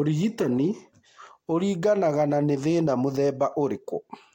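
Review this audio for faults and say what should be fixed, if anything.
Nothing here needs fixing: the speech comes across without any technical faults, so it can stay as it is.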